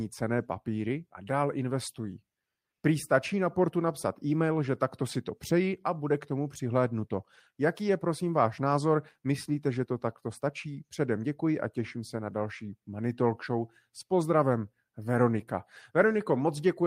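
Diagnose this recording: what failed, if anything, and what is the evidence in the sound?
Nothing failed; no stage in the chain shows faults.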